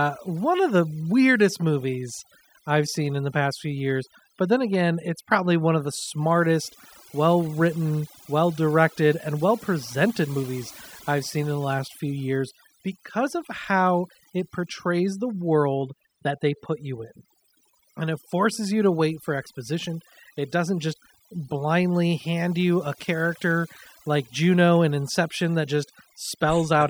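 Overdone noise removal runs through the whole speech recording: a denoiser set far too strong has pulled individual frequency bands down whenever they sat near its noise estimate. The background drops and breaks up into twinkling specks. A spectrogram shows scattered isolated dots and holes where quiet speech detail has vanished.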